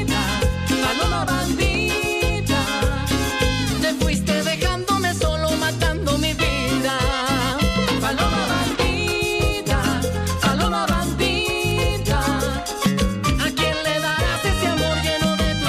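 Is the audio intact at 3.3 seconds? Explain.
No, not quite. At 3.30 s the sound jumps ahead by about five milliseconds, with no gap of silence. That's likely a dropped buffer (overrun): the hardware overwrote a block before it was read, so the two sides were spliced together.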